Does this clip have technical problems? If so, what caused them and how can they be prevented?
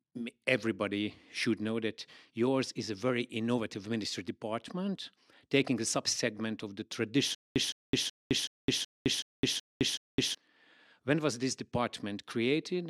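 Yes. From 7.35 to 10.35 s there is a stutter with silent gaps, most likely caused by the player or stream stalling and, on each retry, replaying the last fragment it held before running dry. The same 0.16 s burst of speech returns eight times, every 0.38 s, with about 0.21 s of dead digital silence after each repeat, and the speech that belonged in those three seconds never arrives. Giving the player a larger buffer and a steadier network or disk supply, so it never empties mid-stream, would prevent this.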